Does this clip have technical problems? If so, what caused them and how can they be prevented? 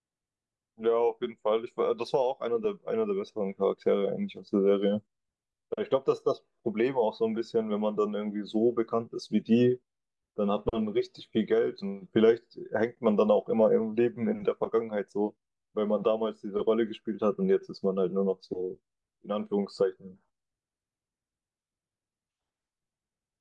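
No, nothing stood out as a technical problem on listening to this speech clip, so there is no cause to trace and nothing to prevent.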